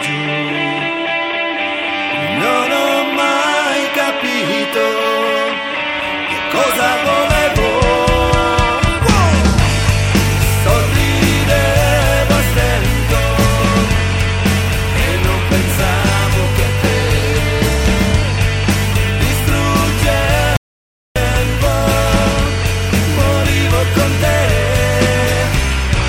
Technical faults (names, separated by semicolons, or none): audio dropout to silence